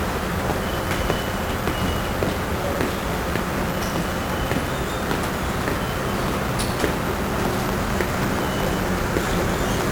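From the first moment to the end, the sound carries the signature of 1-bit DFPWM compression, and heavily so. Each sample keeps only a single bit that nudges an adaptive level up or down, so the waveform is rebuilt as a staircase chasing the original. The result is dense broadband quantisation noise: everything turns fuzzy and crackly, and the upper frequencies disappear under hiss. The density of that noise fits a rate of around 48 kbps.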